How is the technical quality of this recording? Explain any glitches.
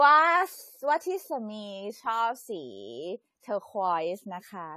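The recording has plainly audible compression damage throughout. The speech sounds dull and smeared, with a watery, warbling texture on held vowels and a fizzy edge on sibilants. Nothing is present above 14 kHz. This is likely AAC compression at a low bitrate, which fits around 32 kbps. The encoder lowers its cut-off to save bits and quantises the remaining frequency bands coarsely, so fine detail blurs and thinly coded bands shimmer from frame to frame.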